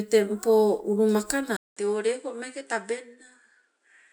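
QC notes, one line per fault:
1.57–4.13 s, input switched to a poorer device: after a 200 ms gap the speech turns duller and about 5 dB quieter to the end, likely because recording moved to a different, weaker microphone. That device passes nothing above 10.5 kHz and brings its own faint noise floor, roughly 50 dB below the speech. On a spectrogram the upper band goes empty at the switch, after a blank vertical strip; the waveform shows the gap and then a smaller envelope.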